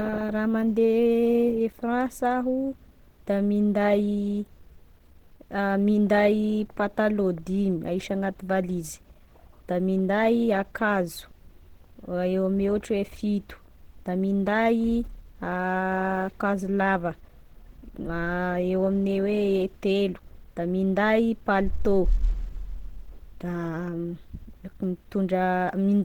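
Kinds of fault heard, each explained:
Opus compression: throughout, the speech sounds hoarse, grainy and muffled, likely from Opus in its hybrid speech mode at a rate that fits about 16 kbps; a spectrogram shows energy reaching 20.1 kHz, but noise-filled, smeared upper bands instead of clean harmonics.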